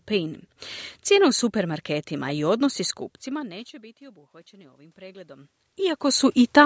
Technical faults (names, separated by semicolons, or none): automatic gain rising